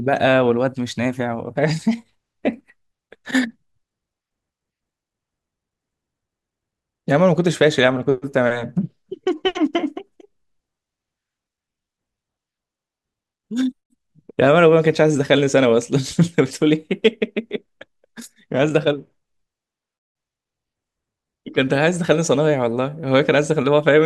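Speech recording with no technical faults to report.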